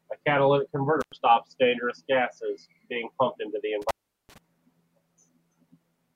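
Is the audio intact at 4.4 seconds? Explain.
No. An intermittent contact spans 3.82 to 4.38 s, right after "being pumped into the": a loose connection opens for about 0.38 s, cutting the sound out. Unlike a clean digital dropout, it crackles at its edges and leaves faint hiss, so 4.4 s falls on that crackly recovery.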